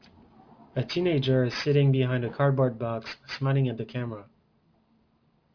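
Throughout, the audio was downsampled from 48 kHz to 11 kHz with no anti-aliasing filter, so energy above the 5.5 kHz fold point reflects back as unrelated frequencies, roughly 20 dB under the speech. This aliasing leaves sibilants gritty and metallic, packed hard against the band edge.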